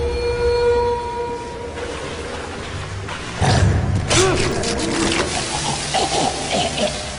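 At 4.52 s the audio skips forward by about 5 ms, the mark of an overlap between stream segments. Two adjacent segments, which fits a 2-second segment length, claimed the same stretch of time, and the player trimmed that span even though it was not duplicated. The waveform jumps discontinuously. Unlike a dropout, no silence or gap is heard. The sound simply lurches ahead.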